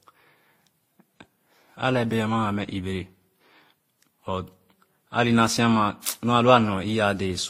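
Throughout the speech, layered artefacts from each codec heard together suggest transcoding between lossy codecs, likely a WMA, Opus, then Vorbis chain; the spectrogram stops sharply at 16.2 kHz.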